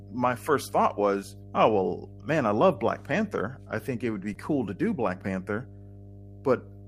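A steady 50 Hz mains hum sits under the whole recording, roughly 20 dB below the speech. That's power-line energy leaking in, probably through a ground loop or a nearby transformer, and it comes across as a constant low drone with a bit of harmonic buzz.

Just after "I think it", from 4.09 to 4.31 s, you get a lost packet rebuilt from error correction. The original packets never arrived, so the decoder played the low-bitrate backup copies carried in the following packets. That covers about 120 ms without a gap, but the audio turns rougher and grainier.

Right after that, from 4.33 to 4.37 s, just before "to do", comes a short concealed packet loss. About 20 ms of audio went missing, and the receiver filled it by extending the preceding sound before blending back in, so it's heard as a quick smear or wobble.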